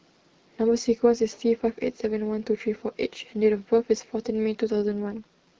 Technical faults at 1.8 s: none

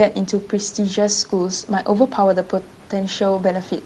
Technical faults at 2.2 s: none

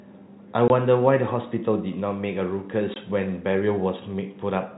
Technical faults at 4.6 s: none

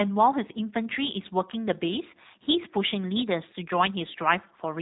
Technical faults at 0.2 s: G.729 codec

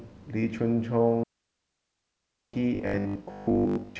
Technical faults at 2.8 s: robotic sound from repeated short buffers

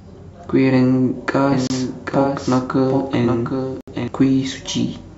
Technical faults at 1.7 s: doubled audio track; Bluetooth stall

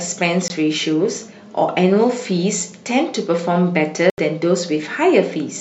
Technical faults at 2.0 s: none

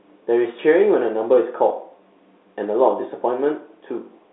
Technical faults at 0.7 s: none

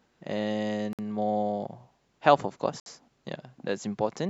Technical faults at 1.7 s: none

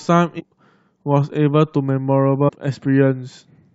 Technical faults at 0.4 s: damaged data in a compressed stream

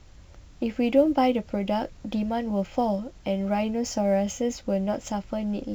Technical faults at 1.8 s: sample clock jitter

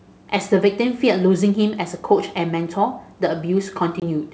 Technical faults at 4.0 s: packet loss on an ADPCM call

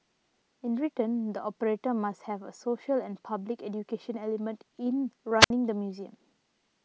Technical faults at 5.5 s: wireless microphone squelch dropout

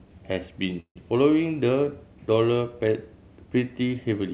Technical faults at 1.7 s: none

